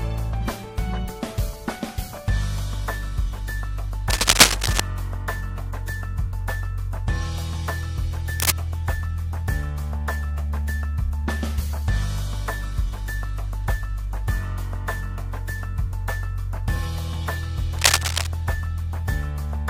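At 4.10 to 4.80 s, 8.33 to 8.50 s and 17.78 to 18.27 s, bursts of cable scratch noise cut across the audio. Each is a dense, irregular rasp, a little louder than the sound underneath. The likely cause is a worn cable, connector or control being disturbed, so that its contact resistance flickers and injects ragged noise into the signal. It is heard as brief scratching or rustling laid over the sound.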